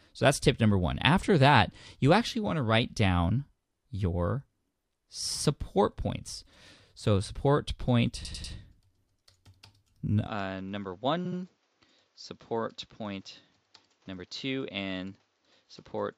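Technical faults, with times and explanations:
8.24–8.53 s and 11.25–11.38 s, repeated frames: short runs of compressed frames are played again, an 85.6 ms block three extra times (adding 287 ms), then a 69.7 ms block twice more (adding 139 ms), giving a stutter.
10.27–16.18 s, input switched to a poorer device: with no gap at the change, the sound turns duller, with nothing above 7.5 kHz, a level drop of about 5 dB and a new noise floor around 40 dB down. This is likely a switch to a narrower-band microphone.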